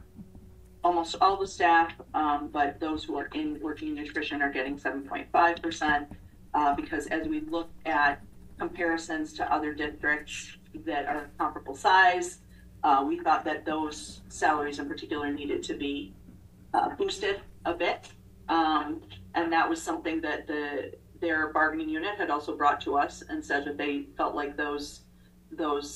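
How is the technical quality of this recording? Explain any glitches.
Nothing glitchy turns up here; the recording runs along without any dropouts, clicks or other technical hiccups to point out.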